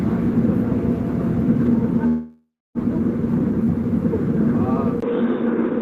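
At 2.07 s the audio stalls until 2.78 s, a call audio freeze that's likely a jitter buffer running dry. The last bit of sound gets stretched into a fading buzz, then about 280 ms of silence. Nothing is lost; it just resumes where it stopped, about 0.68 s late.

Then at 5.00 s there's a 20 ms dropout and the sound turns dull and boxy through to the end, likely an input switched to a poorer device. Everything above 3.8 kHz is gone, it's a little quieter, and a faint new background noise sits well under the signal.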